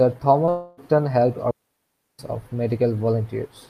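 From 0.45 to 0.49 s a brief smear blurs the speech: short concealed packet loss, where about 20 ms arrived too late and the decoder patched the gap by extending the preceding sound. Straight after, from 0.49 to 0.79 s, a fading synthetic buzz replaces the speech for about 280 ms before real audio resumes further on. This is likely a long network dropout, with concealment covering the whole gap. From 1.51 to 2.19 s a clean, near-silent hole of about 0.68 s appears with no noise at either edge, typical of a digital wireless dropout muting after losing too much data.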